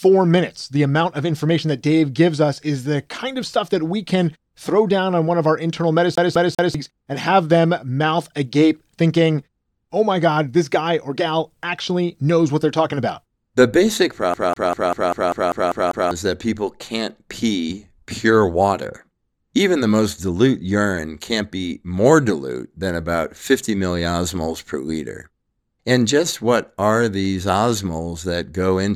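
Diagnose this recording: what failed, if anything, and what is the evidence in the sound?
A fast, even stutter breaks into the speech twice. From 6.15 to 6.75 s, right after "one of our internal", the same 0.20 s fragment plays three times with a brief mute at each jump before "and have them mouth" resumes. From 14.34 to 16.11 s the same 0.20 s loop repeats nine times before "is that people can't". This is a CD stuck on one turn at playback. A scratch throws the laser back one track on every revolution.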